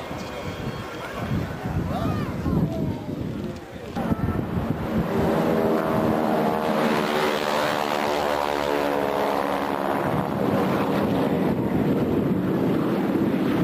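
Nothing goes wrong anywhere in this audio, so there's no fault to point to at any moment.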